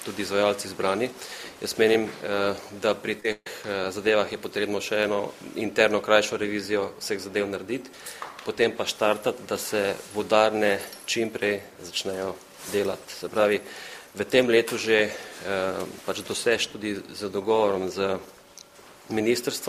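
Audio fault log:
3.20 to 3.25 s, short concealed packet loss (two back-to-back events): a brief smear or wobble where roughly 10 ms of audio is missing in each. The receiver fills each hole by extending the sound just before it, following its pitch where it is tonal or substituting shaped noise where it is not, then cross-fades back into the real signal. The two patches run together, so they read as one short blurred instant rather than two ticks.
3.32 to 3.47 s, burst of packet loss: the sound freezes into a held buzz or fading hiss for about 140 ms, then drops out for about 40 ms before resuming further along. A run of consecutive packets failed to arrive in time, and the concealment could only repeat and progressively attenuate the last good sound, covering about 137 ms of the gap. When it ran out, silence followed, and the material lost in between never returns.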